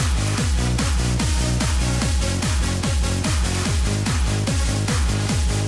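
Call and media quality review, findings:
No faults found in the audio; no ticket items to raise.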